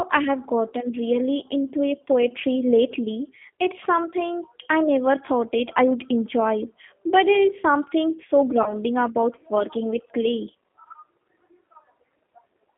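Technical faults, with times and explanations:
Throughout: G.729 codec, audible as rough, slightly synthetic speech confined to about 200 Hz to 3.6 kHz, unlike plain band-limiting, because an 8 kbit/s pulse-based model rebuilds it.
8.63 to 8.74 s: VoIP packet loss concealed by the speech codec. About 30 ms went missing. The decoder stretched its last pitch and filter into a fading buzzy tone or coloured noise, and the distortion lingers past the gap, unlike a clean dropout.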